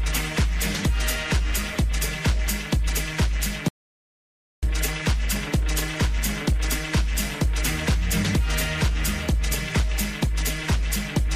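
At 3.68 s the input feeding the recording was likely lost, most probably through a dropped connection, a failed link or an accidental mute, while the recorder kept writing silence. The result is an audio dropout to silence: the sound cuts off abruptly mid-flow and is replaced by silence, with no room tone or background underneath, until it resumes just as suddenly at 4.63 s. Roughly 0.94 s of material is missing outright.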